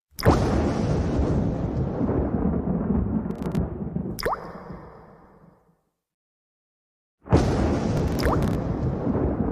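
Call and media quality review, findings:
Processor overload crackle, 3.31 to 3.57 s and 7.97 to 8.55 s: gritty tearing over the sound. Audio engine missing deadlines on short buffers of a few milliseconds, roughly 15 and 20 misses, each dropping out to silence. Probably CPU load spikes.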